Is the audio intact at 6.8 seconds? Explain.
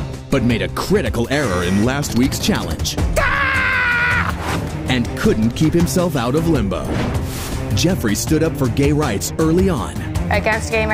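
No. A drift correction step runs from 6.52 to 7.11 s. The sound slows by about 6% and drops about 112 cents, just over a semitone, then snaps back. It is likely a clock-matching resampler changing rate in one step to rebalance its buffer.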